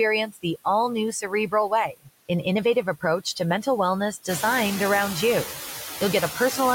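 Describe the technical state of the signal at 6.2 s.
Noise suppressor artifacts are present at 6.2 s, as they are across the whole clip. The suppressor judges which frequency bands hold steady noise frame by frame and pulls them down, here by about 7 dB. Since the room noise rose by about 11 dB around 4.5 s and now sits only about 8 dB below the speech, the processing works hard at this point. The leftover noise dips between syllables and swells under them.

Clock drift buffer slips also fall at this moment. Clicks recur at a steady interval of about 0.79 s from 0.84 s to 6.35 s, so 6.2 s sits just before the last of them. The likely cause is two devices running on separate clocks that disagree by something on the order of 200 ppm. The buffer between them slowly fills or drains until a handful of samples is dropped or repeated, and each of those jumps in the waveform is heard as a tick over the sound.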